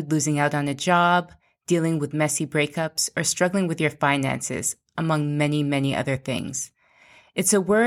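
A speech recording with three dropped samples, each a single sharp click at 0.67 s, between "losing out on" and "a job"; at 1.70 s, after "out on a job" and before "with messy breakups or"; and at 6.39 s, right after "among many many other". Each gap is only a fraction of a millisecond, so no sound goes missing, but the waveform jumps to a later value and leaves a thin vertical line across the spectrum. The likely cause is a brief buffer underrun or sync slip in the capture chain.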